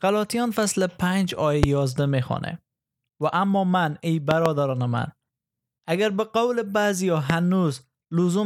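At 1.63 to 1.66 s, a loud pop cuts sharply through the speech, peaking roughly 20 dB above it. A second event at 4.31 to 4.48 s is a pair of pops in quick succession, and a third single pop falls at 7.30 to 7.32 s. Each is a brief electrical transient, likely a voltage step from a connector, switch or static discharge, shaped by the downstream circuitry into a hard click-thump while the speech continues underneath.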